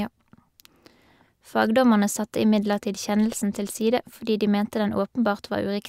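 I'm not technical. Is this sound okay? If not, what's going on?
Yes, nothing wrong can be heard in this recording.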